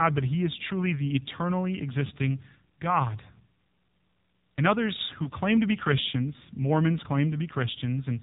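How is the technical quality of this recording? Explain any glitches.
Quality is limited: this is speech that has been squeezed through a phone-network codec, with two short dropouts along the way.

Throughout, you're hearing the AMR narrowband mobile codec, and the damage is plainly audible. Nothing above 4 kHz gets through, so the voice sounds boxy and thin. AMR-NB rebuilds speech from a vocal-tract model driven by a few pulses per subframe, and at this grade, which fits the 7.4 kbps mode, that gives the voice a buzzy, synthetic edge.

The lost AMR speech frames fall at 0.68 to 0.71 s and 5.24 to 5.30 s. Each sounds like a single 20 ms frame failing its checksum over the radio link. The decoder fills the gap by reusing the last good pitch and vocal-tract settings at reduced gain. You hear a quick dip or little warble, and the voice comes back weak or rough for an instant.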